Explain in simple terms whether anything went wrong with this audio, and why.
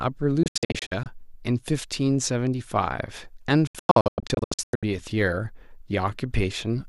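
Digital broadcast dropout, twice: from 0.43 to 1.06 s, and again from 3.67 to 4.83 s. The receiver stopped getting clean data and went silent until good data returned. Each time the speech breaks into a string of short holes, the longest under a tenth of a second, cutting out almost instantly rather than fading. About a third of a second vanishes in the first stretch and about three quarters of a second in the second. That speech is gone, not delayed.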